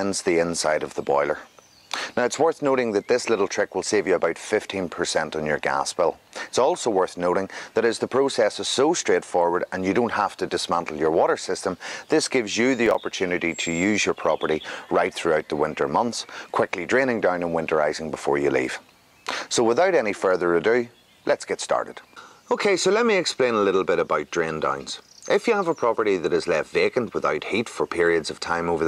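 Processor overload crackle from 12.86 to 13.06 s: a handful of missed deadlines leave hard-edged gaps of silence, spacing that fits roughly 5 ms buffers.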